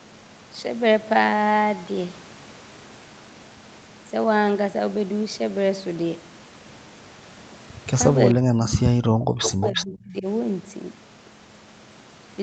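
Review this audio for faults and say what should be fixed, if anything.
Speech suppressed in double talk, from 8.35 to 10.25 s. The voice drops by up to roughly 40 dB, likely because the echo canceller turned down both its own talker and the loudspeaker echo. Tune double-talk detection so near speech is kept.

Echo leak, at 9.42 to 9.50 s and 9.67 to 9.96 s. A copy of the voice returns 352 ms late, about 10 dB and 5 dB below the speech, likely from incomplete echo cancellation. Improve the canceller or use a headset.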